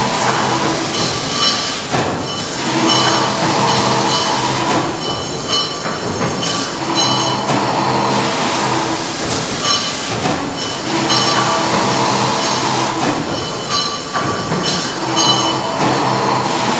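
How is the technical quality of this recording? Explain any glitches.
No glitches or faults audible.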